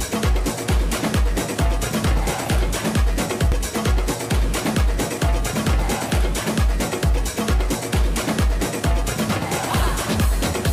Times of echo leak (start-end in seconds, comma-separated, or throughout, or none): none